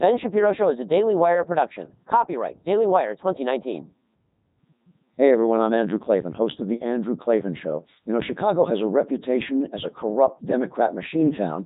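From start to finish the speech runs through a Codec 2 vocoder, and the buzzy, robotic quality fits its top 3.2 kbit/s mode. Only pitch, voicing, energy and spectral shape survive, so sine-wave resynthesis heavily mangles the voice, with nothing above 3.8 kHz.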